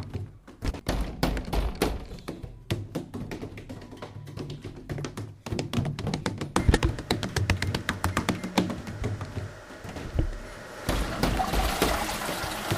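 Hard clipping runs from 6.26 s to 8.59 s. Across that stretch the signal was pushed about 7 dB beyond what one stage in the chain could carry, so every peak that crossed the ceiling was sliced off flat instead of rounding over. Those squared-off tops generate a spray of high harmonics.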